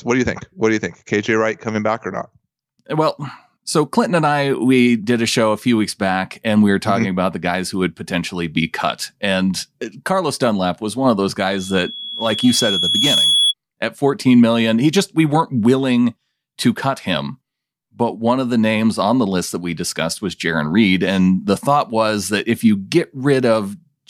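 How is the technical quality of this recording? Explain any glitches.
The recording has one clear glitch, a loudspeaker feedback squeal from 11.51 to 13.54 s. A microphone is picking up its own loudspeaker, and at 3.4 kHz the loop gain exceeds one. The tone swells over roughly a second and a half until it sits a few decibels above the speech. That steady growth sets it apart from an interfering whine, which would hold a fixed level.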